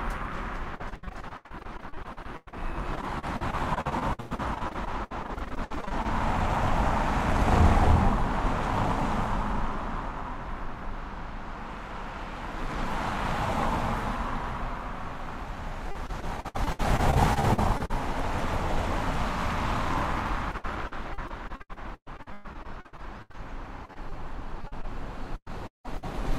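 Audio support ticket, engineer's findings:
Repeated packet loss (robotic sound) at 0.75–6.06 s, 15.91–17.91 s, 20.51–26.07 s. Choppy texture; network jitter buffer concealing dense runs of lost packets, roughly 24–30% of each span. Spectrogram: smeared, repeated frames; waveform: looped segments, gaps up to 174 ms.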